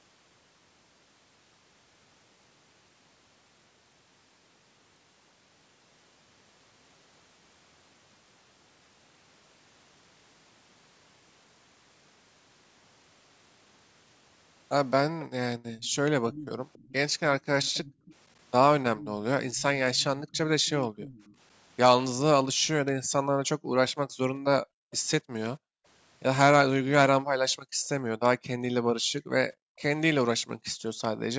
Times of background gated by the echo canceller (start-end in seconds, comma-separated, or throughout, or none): 17.94-18.06, 20.16-20.99, 22.54-25.85, 27.58-27.84, 29.01-30.67